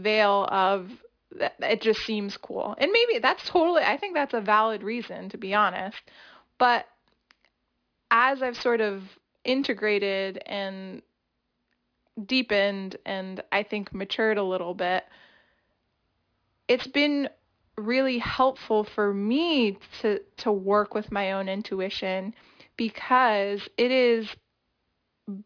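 Speech with aliasing throughout: sibilants turn gritty and metallic, with energy running hard up to about 5.5 kHz. That points to a drop to roughly 11 kHz without an anti-alias filter, folding higher content back as stray tones about 25 dB down. Plain band-limiting would sound dull instead.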